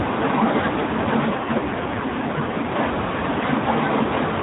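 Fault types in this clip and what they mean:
AMR rate drop: From about 1.26 to 2.74 s the speech turns rougher and more synthetic while the band stays the same narrow AMR-NB one and nothing drops out. That fits the codec switching from 12.2 to 5.9 kbps on a weak link.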